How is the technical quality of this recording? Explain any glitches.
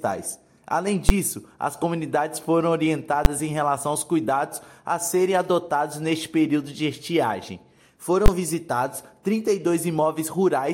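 Not great, honestly: three loud bangs break it up. Invalid numbers at full scale hit at 1.09 s, 3.25 s and 8.26–8.28 s. Broken maths slammed the output to maximum for 10–20 ms blocks, so each one cracks as a single bang.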